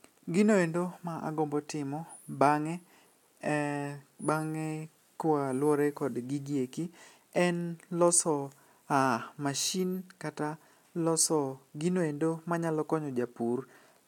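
No technical faults are audible anywhere in this speech recording.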